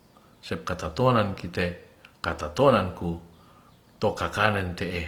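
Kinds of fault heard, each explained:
Opus compression: likely an Opus encoder in music mode near 24 kbps filling starved bands with noise, leaving the speech plainly grainy and rough throughout.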